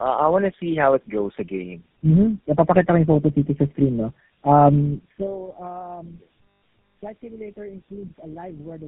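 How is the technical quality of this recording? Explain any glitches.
The speech sounds rough, muffled and warbly throughout, with nothing above 3.8 kHz. This is tandem speech coding: the signal seems to have passed through about four low-rate speech codecs in a row, each re-encoding the previous one's degraded output, so the artefacts compound.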